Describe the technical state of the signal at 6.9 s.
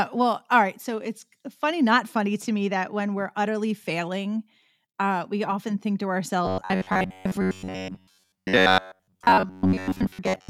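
New audio likely arrives too seldom at 6.9 s, which falls within robotic sound from repeated short buffers lasting from 6.45 s to 10.49 s. A fragment about 10.7 ms long is replayed over most of that span, forcing a rigid, metallic 93.8 Hz buzz onto the voice.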